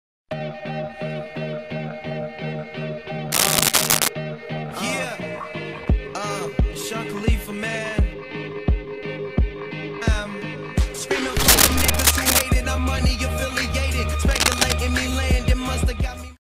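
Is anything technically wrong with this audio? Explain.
Yes. There is cable scratch noise in three bursts, at 3.32 to 4.09 s, 11.48 to 12.44 s and 14.31 to 14.73 s. The first two sit about 5 dB above the sound and the last is roughly level with it. Each is a dense, ragged scratching, likely from a worn connector or cable being moved. On a spectrogram these show as broadband, uneven vertical smears, and on the waveform as clusters of jagged spikes.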